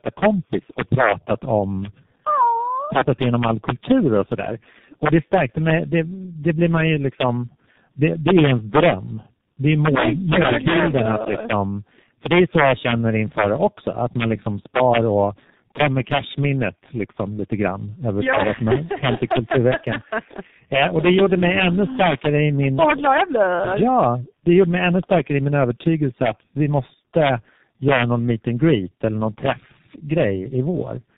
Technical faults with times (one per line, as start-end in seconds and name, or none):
0.00-31.18 integer overflow
0.00-31.18 tandem speech coding